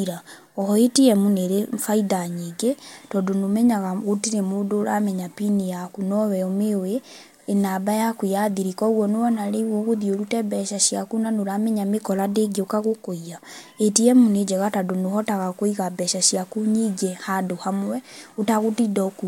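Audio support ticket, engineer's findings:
Nothing stood out on listening to the speech recording; no symptom found to attribute to any component.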